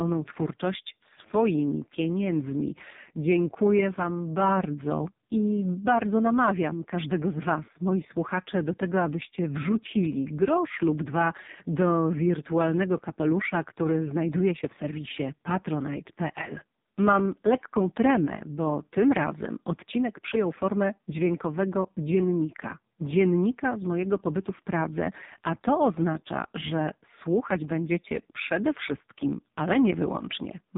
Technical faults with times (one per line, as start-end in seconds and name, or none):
0.00-30.77 AMR narrowband mobile codec